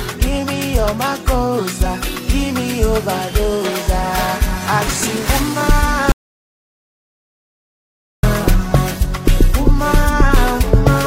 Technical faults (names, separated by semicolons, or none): compressed frames skipped; audio dropout to silence